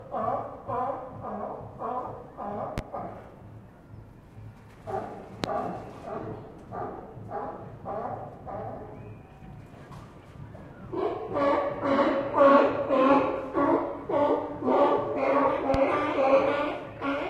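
A loud pop lands at 2.78 to 2.81 s. Two more follow at 5.44 to 5.47 s and 15.74 to 15.78 s. Each is a single sharp thump lasting a few hundredths of a second. The first peaks roughly 15 dB above the surrounding sound. The later two are louder, near 20 dB above it. The sound carries on unbroken underneath. A brief electrical voltage spike, likely from a switch, connector or static discharge, was added to the signal.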